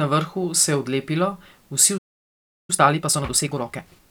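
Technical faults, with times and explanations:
1.97–2.70 s, playback stall: right after "se je odlepilo vsi" the speech drops out for about 0.71 s, likely the player starving for data before it resumes.
2.70–4.00 s, time-compressed catch-up: the player trims its backlog by splicing out small pieces, so speech runs about 1.5 times fast at normal pitch.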